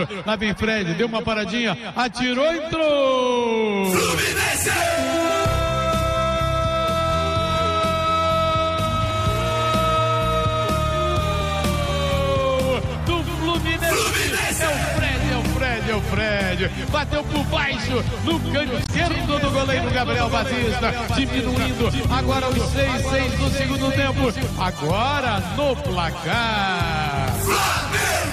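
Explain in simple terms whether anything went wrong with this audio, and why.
Two things go wrong here, both around the 19-second mark.

From 18.66 s to 24.45 s there's a doubled audio track: a second copy of the same sound plays about 0.7 seconds behind the first, a bit quieter, so everything seems to repeat itself like a flat, clean echo with no room sound. It switches on and off abruptly. The likely cause is the audio being picked up twice, once through a slower route, or an edit that left two out-of-step copies layered together.

Right as that starts, from 18.83 s to 18.89 s, there's a short glitch. That's damaged data in a compressed stream: a small chunk of the compressed file got corrupted, so the player couldn't decode it properly, briefly lost its place, and had to hunt for the next readable piece. That scramble is what makes the glitch, and the sound may skip ahead slightly there.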